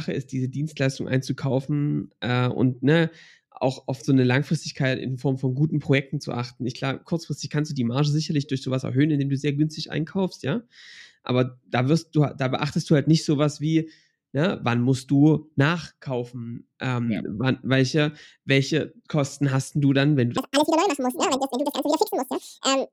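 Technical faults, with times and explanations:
20.38 s to the end: audio read two samples at a time (double speed). The final stretch of speech suddenly runs twice as fast and a full octave higher, about 12 semitones. The reader is taking each pair of samples as one frame, as if the data had two channels or samples twice as wide. That halves the playing time and doubles every frequency, and any content above a quarter of the sample rate folds back down as aliasing.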